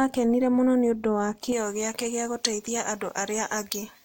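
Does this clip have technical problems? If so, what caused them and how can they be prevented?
Yes. From 1.52 s, right after "mũno nĩ ũndũ wa", to the end, the speech has pre-emphasis left on. The treble was lifted for recording or transmission and the matching de-emphasis was never applied, leaving 10 kHz about 11 dB above 1 kHz, a shape that fits a J.17 curve. The sound turns thin, bright and sibilant. It differs from a lost low end because the bass is intact and the boost climbs steadily with frequency. To prevent it, make sure whichever stage adds pre-emphasis is paired with a matching de-emphasis at playback.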